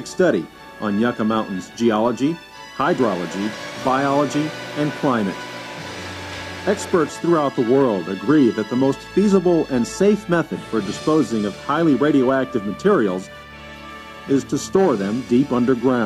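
No technical faults are audible.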